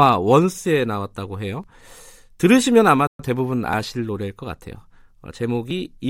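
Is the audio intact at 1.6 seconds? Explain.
No, there is audio missing between chunks at 1.64 s: about 30 ms vanishes and the two sides butt together, likely lost while a 2-second processing chunk handed over.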